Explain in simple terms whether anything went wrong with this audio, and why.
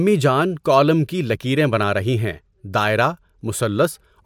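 Nothing went wrong here: the recording runs along steadily with no glitches, dropouts or odd noises to catch the ear at any point.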